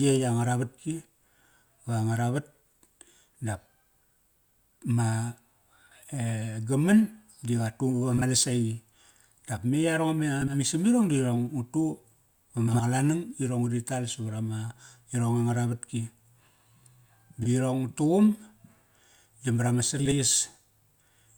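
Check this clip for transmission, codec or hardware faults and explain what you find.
There's one recurring transmission fault: frames out of order, at 8.17–8.22, 10.41–10.55, 12.68–12.81, 17.42–17.48 and 19.99–20.14 s. Neighbouring chunks of the speech got decoded swapped, consistent with blocks of 20 ms and 60 ms, so each spot gives a brief garbled flutter. No time goes missing.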